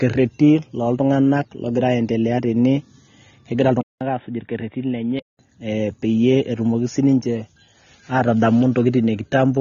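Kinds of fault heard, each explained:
AAC compression: The speech is dull and smeared throughout, with nothing above 6.9 kHz and plainly audible codec damage: a warbly, fizzy texture on sustained sounds and sibilants. This points to AAC-LC at a low bitrate, around 24 kbps. At that rate the encoder discards the upper spectrum and coarsely quantises what remains against its hearing model, leaving holes and noise-filled bands. The codec is the likely cause.
Input switched to a poorer device: From 3.81 s to 5.39 s the sound turns narrow and boxy, with nothing above 3.8 kHz. It drops about 5 dB in level and carries a faint new noise floor about 50 dB down. A gap of about 0.2 s of silence marks the changeover. A mid-recording change to a lower-bandwidth microphone or a headset call profile is the likely cause, with the input returning to the original afterwards.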